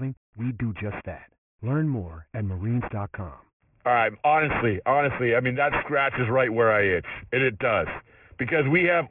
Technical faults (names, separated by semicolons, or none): aliasing